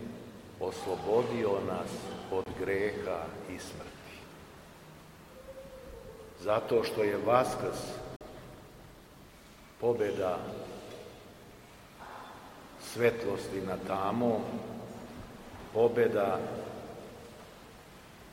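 The audio cuts out twice: a short hole from 2.44 to 2.46 s, about 23 ms of sound gone, and a longer one from 8.16 to 8.21 s, about 46 ms missing. In both gaps the sound picks up further along as if it kept playing through the silence. That's a classic Bluetooth dropout, most likely packets not reaching the headphones in time, and the two lengths fit roughly one and two lost packets.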